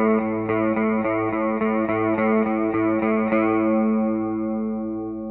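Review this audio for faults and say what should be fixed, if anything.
Nothing to fix: no faults are audible anywhere in this audio.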